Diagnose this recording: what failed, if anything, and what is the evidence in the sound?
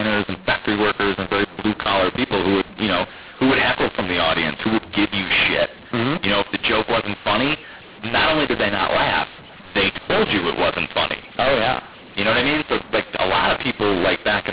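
Codec mismatch, mu-law and A-law mixed up: mu-law speech decoded as A-law throughout, so levels scramble, it sounds harsh and gritty, and the pauses hiss with lifted noise.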